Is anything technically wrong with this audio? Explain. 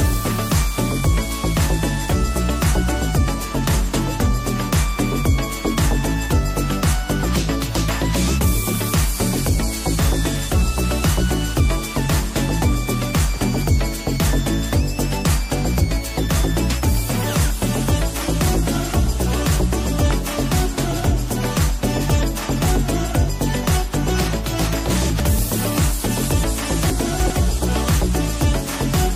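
Yes, there are two kinds of fault.

At 20.11 s there is a loud pop. A sudden voltage step or pulse, likely from a plug, a switch, static discharge or a driver glitch, entered the signal path, and the downstream circuitry shaped it into a brief transient. It is a single sharp pop standing roughly 10 dB above the surrounding audio, lasting only a moment, while the sound itself continues underneath without interruption.

From 24.9 to 25.2 s and again from 26.9 to 27.3 s, chunks play out of order. In each case a block of audio was delivered or written late and was placed after material that should have come after it. The spans point to 100 ms chunks, displaced by about two places in the first instance and three in the second. No audio is lost, but the sequence is scrambled, and each reordering leaves three hard joins. Both moments sound jumbled and garbled.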